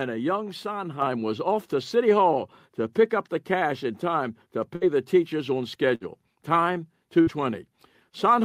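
At 1.02 s, between "a young" and "was off to", the call software raised the microphone's input volume in a single step, a microphone volume step-up, so voice and background jump together by about 5 dB.

A burst of packet loss follows at 4.75 s, between "cash in time to" and "the teachers on", again at 5.95 s just after "the teachers on", and at 7.21 s. Each time, about 60 ms of audio never arrived. The receiver stretched the last sound into a fading buzz or hiss for roughly 60 ms, then resumed further on.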